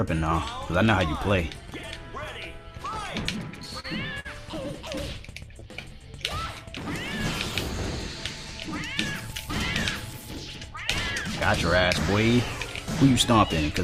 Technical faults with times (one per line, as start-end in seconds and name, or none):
3.51-4.27 repeated stalls (stutter)
5.53-5.94 jitter buffer slow-down
8.00-8.46 jitter buffer speed-up